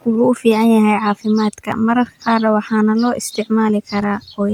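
This speech clip has one overlap between stream segments at 1.72 to 1.75 s, just before "maqaarka waxaana loo". About 32 ms is cut away, so the waveform jumps with a brief skip.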